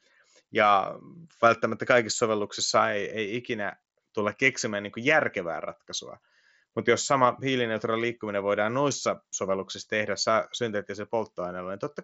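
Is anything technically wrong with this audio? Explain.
No, nothing stood out as technically wrong on listening to this speech clip.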